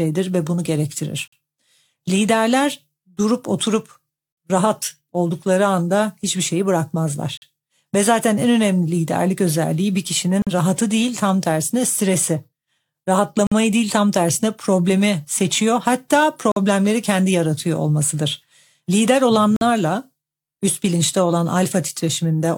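Gap between chunks at 1.28, 7.37, 10.42, 13.47, 16.52 and 19.56 s: the speech arrives in 3-second pieces joined late, leaving hard-edged holes of about 48 ms.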